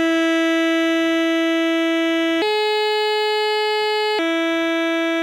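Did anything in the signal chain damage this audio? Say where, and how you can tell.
Yes. A section at the wrong speed runs from 2.42 s to 4.19 s: the music suddenly plays 1.29 times too fast, rising about four semitones and rushing, then drops back. That points to a clock mismatch, likely during editing or playback, when this stretch was resampled.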